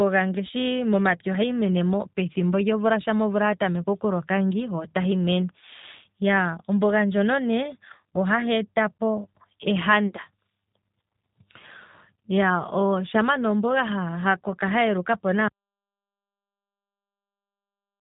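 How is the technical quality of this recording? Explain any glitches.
The recording has clear technical faults: codec damage throughout, and sound that disappears near the end.

Across the whole clip, the G.729 codec's signature is plain. Nothing above about 3.8 kHz survives, and the speech sounds rough and synthetic, which fits an 8 kbit/s G.729 stream. That texture comes from rebuilding speech from a filter and pulses; simple low-pass filtering would only sound dull, not synthetic.

From 15.48 s to the end, an audio dropout to silence leaves silence with no room tone. The likely cause is a lost input while recording continued. A fade would drop gradually and leave residual noise, but this cuts off abruptly.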